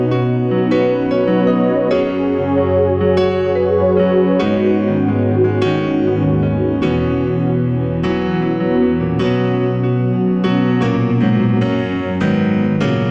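Nothing goes wrong anywhere in this one, so there's no fault to point to at any moment along the way.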